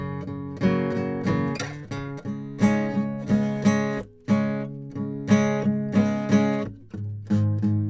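No technical faults can be heard anywhere in this music clip. Nothing in the recording points to dropouts, glitches or other signal-path problems.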